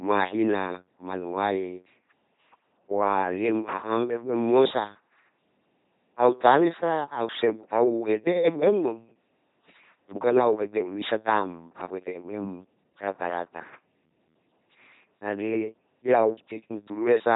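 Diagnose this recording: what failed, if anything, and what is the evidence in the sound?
The codec stage failed. The LPC-10 vocoder artefact runs through the whole speech clip. Every syllable sounds like a buzzing, mechanical robot. Voiced stretches turn into a pulse-train buzz, and unvoiced stretches into hiss. Nothing is present above 3.8 kHz. The coder rebuilds each frame from a small all-pole vocal-tract filter fed by either pulses or noise, never both. The damage is heavy, which fits a 2.4 kbit/s link.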